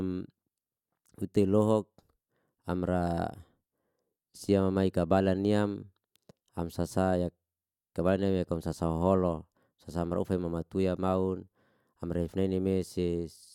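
Nothing stood out as a technical fault on listening to this speech recording.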